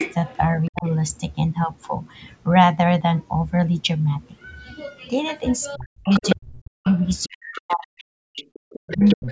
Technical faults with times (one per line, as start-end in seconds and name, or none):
0.00-0.15 other side's voice leaking through
0.66-0.91 other side's voice leaking through
0.69-0.86 speech suppressed in double talk
5.73-6.36 other side's voice leaking through
5.76-6.86 speech suppressed in double talk
6.84-8.04 other side's voice leaking through
7.26-9.31 speech suppressed in double talk
8.37-9.31 other side's voice leaking through